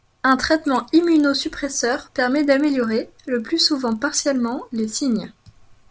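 Throughout, a 25 Hz buzz rides on the speech because the resampler restarted on every block. Each 40 ms block was converted alone, which fits a 48 kHz to 16 kHz step, leaving an error at every edge. Unlike mains hum, it stops in pauses.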